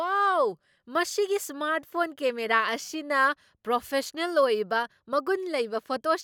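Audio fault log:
No faults detected in clip.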